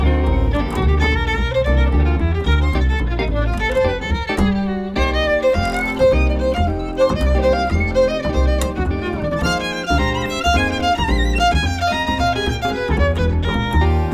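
No technical faults can be heard anywhere in this audio.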